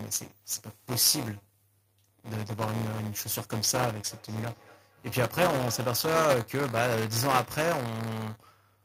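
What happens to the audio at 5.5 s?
At 5.5 s the clip is inside a stretch of feedback echo between two devices, running from 4.11 to 6.43 s. A second device in the same room is playing back what this microphone sent, and the microphone picks it up again. The local echo canceller ignores it because its own device didn't play it. Each stretch of speech comes back roughly a fifth of a second later, thinner and more ringing, peaking at about 18 dB below the speech.

Buffer tearing runs through the whole clip, including this moment. The software filling the playback ring buffer and the hardware draining it have drifted until they cross inside every period. A small slice of each buffer, around a tenth of it, still holds audio from the previous lap, roughly 10 ms old, with a hard join at either edge. Those joins repeat at 200 Hz, which points to a buffer period of about 5 ms. The result is a steady robotic buzz riding on the speech wherever there is signal.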